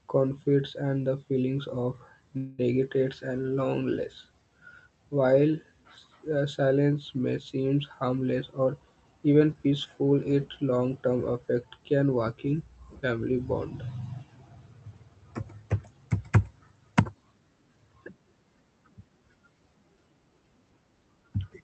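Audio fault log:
2.37–2.60 s, call audio freeze: Right after "and the feelings of", the speech stalls and the last sound is drawn out for about 210 ms as a buzz or hiss that fades, with no true silence. This is likely packets held up in transit, leaving the jitter buffer empty so the receiver stretched what it had. When the audio resumes it picks up exactly where it stopped, so nothing is lost, but everything after is about 210 ms later.
7.92–9.86 s, jitter buffer speed-up: Following "silence may seem", the speech runs at about 111% of its normal rate while the pitch stays unchanged, so the delivery sounds hurried. The receiver was holding more buffered audio than it wanted, so it trimmed out short slices one or a few pitch periods long, again and again, removing roughly a fifth of a second in total to bring the delay back down.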